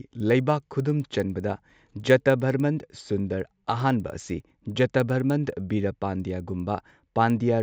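Throughout the speech, regular ticks recur every 100 ms, at 10 Hz. The resampler restarted on every block, likely 16 kHz to 48 kHz, leaving errors at each block edge.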